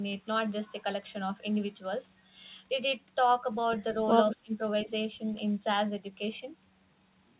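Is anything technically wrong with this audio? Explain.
Yes, there are two related problems in a short stretch around 4.3 to 4.9 s of this speech.

Speech suppressed in double talk: from 4.31 to 4.53 s the level drops by about 20 dB, and again from 4.84 to 4.89 s by about 10 dB. The likely cause is an echo canceller that heard far-end audio at the same moment, could not tell the talker from loudspeaker echo, and turned everything down. It sounds like the voice ducking or briefly cutting out. On the waveform the envelope pinches inward. On the spectrogram those spans fade across the band.

Echo leak: from 4.32 to 4.36 s a faint delayed copy of the voice comes through, trailing the original by 214 ms at about 15 dB below the speech. This is likely residual echo that a loudspeaker-side canceller failed to remove and sent back. It is heard as a brief ghost of earlier syllables. On the spectrogram it shows as a weak replica of the earlier harmonic pattern, shifted right by about 0.2 s. 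The band ends at 4 kHz, which fits a narrowband call codec, so the leaked copy is no brighter than the speech.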